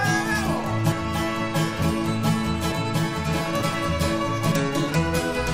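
Audio missing between chunks occurs at 1.82 s and again at 2.72 s, where the sound jumps forward abruptly with no silence at the join, each time skipping about a tenth of a second of material. The likely cause is a recorder or processor handling the audio in 1-second blocks and dropping a short piece while closing one block and opening the next. The 0.9 s gap between the two skips fits that pattern, since each loss shortens the stretch between joins.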